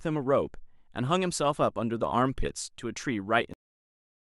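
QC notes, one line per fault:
3.54–4.38 s, cut-off end: the speech stops abruptly mid-sound at 3.54 s because the final buffers never reached the output. There is no natural decay. The waveform drops straight to flat silence, and the spectrogram shows a hard vertical edge followed by empty black.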